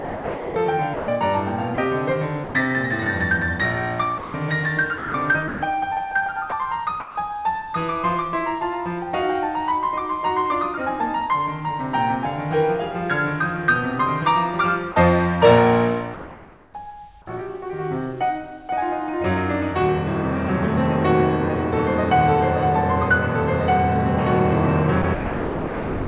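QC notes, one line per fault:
0.00–2.54 s, 4.18–5.62 s, 6.50–7.16 s and 25.02–26.07 s, sound chopped by the voice detector: the sender's detector likely kept switching off and on during quiet passages of the music. About 820, 460, 180 and 960 ms are swapped for synthetic noise, so the music stutters.
14.92–14.96 s, sound dropped by the voice detector: the detector likely mistook a soft moment of the music for background and stopped sending. A 40 ms slice is lost and filled with comfort noise, heard as a tiny gap before the music resumes.
16.14–16.74 s, comfort noise in place of the background: with transmission likely paused, the receiver plays 600 ms of generated noise about 25 dB below the loud parts. The real background's texture turns flat and featureless at the same level, under the 4 kHz band limit of the G.711 call path.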